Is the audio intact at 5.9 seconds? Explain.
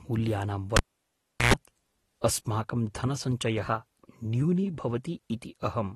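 No. At 5.9 s, as throughout, the speech carries plainly audible AAC compression damage: smeared, warbling texture with fizzy sibilants. The likely cause is AAC-LC at a low bitrate, consistent with about 32 kbps, quantising frequency lines too coarsely for the hearing model.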